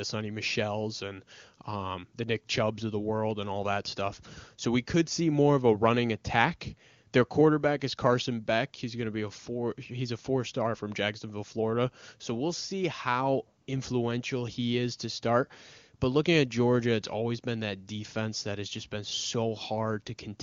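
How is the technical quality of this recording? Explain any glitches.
One brief glitch stands out. The wideband phone codec sounds clean, which points to a high-rate mode.

At 13.61 to 13.67 s, between "we'll see how" and "influential he is to", there is a short burst of AMR comfort noise. The phone judged the talker silent for about 60 ms and sent no speech frames. The receiver then generated synthetic noise from a rough level and spectrum estimate. The real background briefly gives way to a smooth, even hiss.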